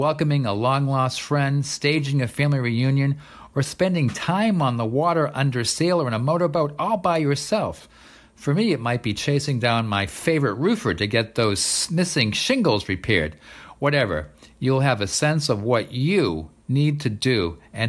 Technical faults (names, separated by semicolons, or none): none